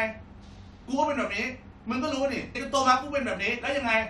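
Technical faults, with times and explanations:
2.54 s, damaged data in a compressed stream: a brief glitch breaks into the speech. Corrupted bytes in the encoded stream made the decoder misread the frame there, lose sync and resume at the next valid frame header.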